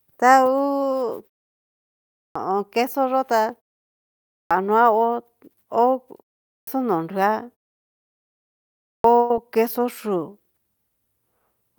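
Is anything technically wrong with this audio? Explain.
Yes, there are two kinds of fault in this speech.

Clipped start after a pause at 2.22, 4.39, 6.55 and 8.92 s: after pauses of 0.4 to 1.4 s, the output device has gone idle and must wake again. Roughly 0.12 to 0.13 s of each onset is lost, so speech bursts in abruptly without its first sounds.

Burst of packet loss at 9.18 to 9.31 s: about 120 ms of audio never arrived in time to play. The receiver filled the gap by extending the preceding sound and letting it fade. Speech then resumes further along, with that stretch missing entirely rather than replaced by silence.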